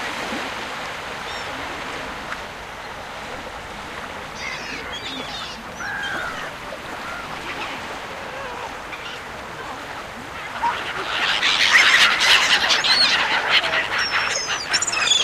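From 11.63 to 13.04 s there is hard clipping. The signal drives a stage about 6 dB past the largest level it can carry. The peaks that don't fit are sliced off flat. Those squared-off tops add harmonics high in the spectrum. The result is a crackle on the loud peaks of the sound in that stretch. The clean waveform returns after 13.04 s.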